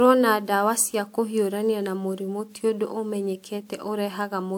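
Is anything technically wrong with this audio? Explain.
Yes, there's generation loss across the whole speech clip: a swirly, hollow smear with softened attacks, more than 128 kbit/s should give. It sounds like WMA-style coding run about four times, each pass requantising on a shifted frame grid, likely stacking the damage. Nothing remains above 20.1 kHz.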